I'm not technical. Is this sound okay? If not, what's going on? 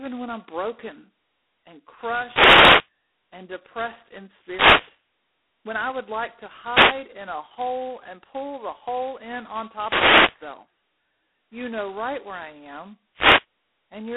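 No. Two separate problems are audible in this speech.

The first runs the whole way through. It is G.726 ADPCM, a telephone coding method set to its lowest quality here. The voice sounds thin and phone-like, with no crisp top end. A harsh, rasping hiss rides on the words. Unlike ordinary background noise, this hiss gets louder when the voice is louder and fades in pauses, because the coder's errors grow with the sound it is trying to copy.

The second is five wireless microphone noise hits: short bursts of swishing static. They come at 2.25 to 2.91 s (after "when I'm broken and", before "and depressed in"), 4.34 to 5.04 s, 6.70 to 6.98 s, 9.80 to 10.39 s (after "the hole in on") and 13.14 to 13.46 s (after "right where I am"). They happen when the radio signal from the microphone fades for a moment. They are easy to tell apart from the coding hiss because they arrive as separate bursts at these times and don't follow the voice's loudness.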